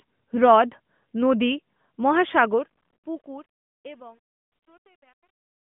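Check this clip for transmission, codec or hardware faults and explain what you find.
One fault turns up: truncation distortion on a fade. From 2.30 s the fade-out goes grainy, and from 3.42 s to the end at 5.74 s the grit is at its worst. The gain stage sounds like it's keeping only about 10 bits with no dither, so the quiet tail collapses into coarse steps. The fade starts around 2.3 s, and the narrowband, phone-like tone of the mobile codec comes through around it.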